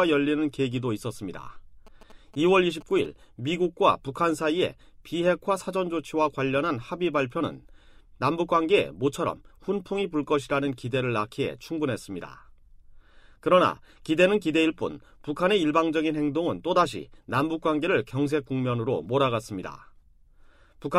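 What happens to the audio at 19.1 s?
Nothing goes wrong at 19.1 s: the audio plays through that moment intact, with no dropout, click, distortion or other fault.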